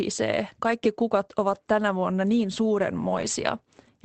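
Two spots here are a lost packet rebuilt from error correction. First, at 1.53 to 1.55 s, a single 20 ms stretch turns briefly rougher and grainier. Then from 3.09 to 3.27 s there's a longer rebuilt run of about 100 ms, which fits five separate lost packets. The Opus decoder filled each gap with the low-bitrate copy carried in the following packet, so nothing drops out, but those frames come through noisier and coarser than the surrounding call audio.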